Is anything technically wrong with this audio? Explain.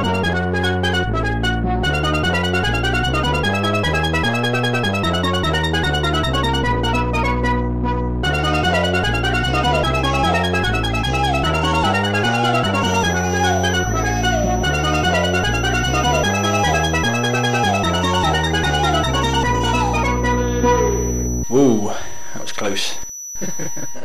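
Yes. From 12.75 s to the end there is a feedback whistle: a thin, steady tone near 5.9 kHz sitting roughly 15 dB below the sound, swelling and fading slowly in level. It is likely caused by a loudspeaker-to-microphone loop balanced at the edge of feedback, so one frequency keeps ringing without building up. Unlike a runaway howl, it never builds into a howl, and its slow level swell sets it apart from a fixed electrical tone.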